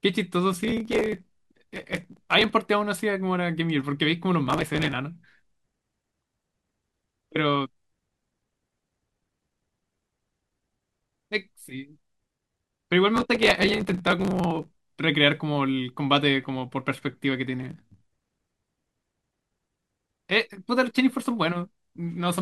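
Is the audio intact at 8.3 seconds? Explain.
Yes, at 8.3 seconds the speech runs on without any audible fault.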